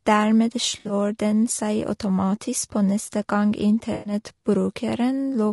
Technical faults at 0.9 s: low-delay AAC compression; AAC frame loss with concealment

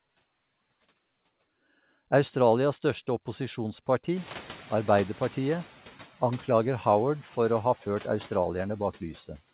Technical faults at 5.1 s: noise suppressor catching up

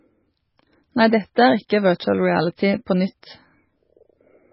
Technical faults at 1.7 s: MP3 compression; pre-echo

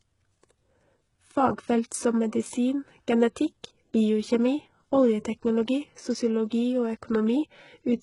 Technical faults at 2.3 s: HE-AAC compression

